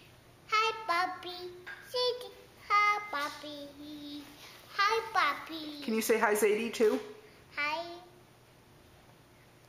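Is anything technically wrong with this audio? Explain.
No, there's nothing technically wrong to point out here; the audio holds together fine from the first moment to the last.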